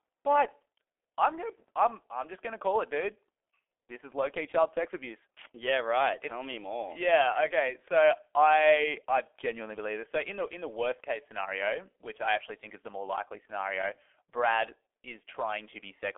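A speech recording, muffled from start to finish by heavy G.723.1 codec damage. Nothing above 3.5 kHz survives, inside a 300 Hz to 3.4 kHz phone band. The hoarse, smeared consonants come from slow 30 ms frame updates at about 6.3 kbit/s.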